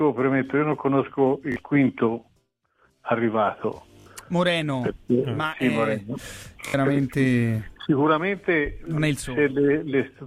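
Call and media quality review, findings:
Repeated buffer at 1.52–1.56 s, 4.00–4.06 s and 6.68–6.74 s: brief buzzy stutters from one short slice looping two to three extra times, fitting a 20 ms playback buffer. Device starved of new audio, replayed last block; roughly 40–70 ms lost each time.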